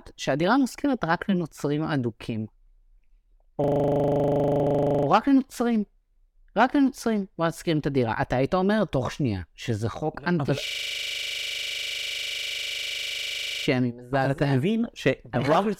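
From 3.64 to 5.07 s, a system hang loop sets in. The system has stalled while the hardware keeps replaying one 40 ms slice of its ring buffer, so a single fragment repeats at 25 Hz as a hard, rattling stutter. It resumes with no audio apparently skipped. At 4.62 s, inside that loop, a brief blip marks damaged data in a compressed stream: corrupt bytes make the decoder misread a frame before it regains sync. The system hang loop returns from 10.67 to 13.67 s, again cycling a 40 ms slice at 25 Hz, about 75 times this pass.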